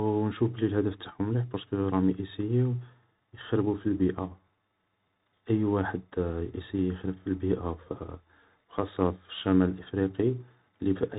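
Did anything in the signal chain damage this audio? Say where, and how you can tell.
Yes. A Bluetooth CVSD headset codec degrades the speech throughout, at the codec stage. Nothing passes above 4 kHz, s sounds turn scratchy, loud bright syllables distort, and granular hiss sits underneath. This fits a 64 kbit/s one-bit stream whose adaptive step size can't track fast rises.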